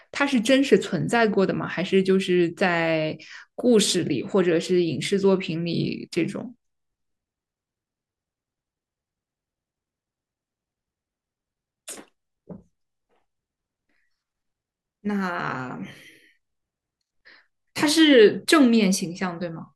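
At 15.6 s there's a single sharp click in the speech, and it sounds like dropped samples. The likely cause is a tiny gap in the stream, a fraction of a millisecond, where a few samples never arrived, so the waveform jumps straight from one value to a later one. Nothing audible is actually lost. You just get that one tick, and on a spectrogram it would show as a thin vertical line.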